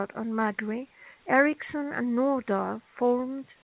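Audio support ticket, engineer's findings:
Comfort noise in place of the background, 3.62 to 3.70 s: final 80 ms of room tone replaced by flat, featureless hiss, about 18 dB quieter. Likely discontinuous transmission: sender's voice detector stopped sending, receiver synthesised noise. Narrowband G.711-style band limit, nothing above 4 kHz, throughout.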